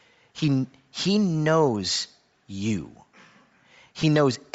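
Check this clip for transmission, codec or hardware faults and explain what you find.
Two faults are audible. Throughout, the speech is likely passed through Bluetooth LC3 compression at a low bitrate, which fits about 32 kbps; the removed upper spectrum is noise-filled, giving plainly audible breathy, grainy highs. At 4.02 s, a lost LE Audio frame, about 10 ms, was concealed by reusing the previous spectrum with randomised phase, leaving a brief noisy smear.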